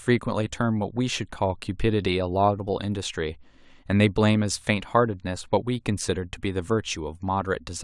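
From 2.08 to 5.48 s the resampler restarted on every block, converting each 40 ms block in isolation, likely from 48 kHz to 24 kHz, leaving an edge error. Regular ticks at 25 Hz ride the speech, seen as evenly spaced vertical lines on a spectrogram and tiny waveform steps.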